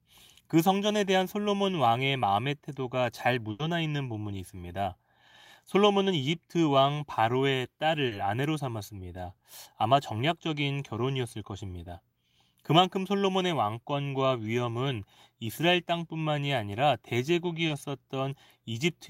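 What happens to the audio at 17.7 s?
At 17.67 to 17.71 s there's short concealed packet loss: about 20 ms never arrived, so the decoder stretched the preceding speech to cover it, leaving a brief smear.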